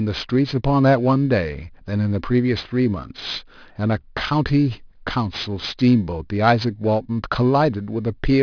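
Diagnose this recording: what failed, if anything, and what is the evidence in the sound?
Aliasing at the sample-rate conversion stage, throughout the speech: sibilants come out gritty and metallic, with tones folding back below 5.5 kHz, roughly 20 dB under the speech. That fits an unfiltered drop from 24 kHz to 11 kHz. A plain low-pass would only dull them.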